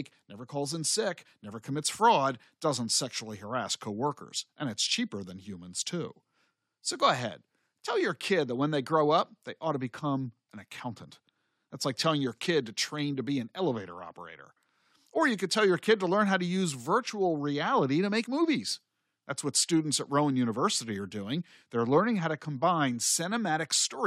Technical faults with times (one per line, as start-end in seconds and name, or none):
none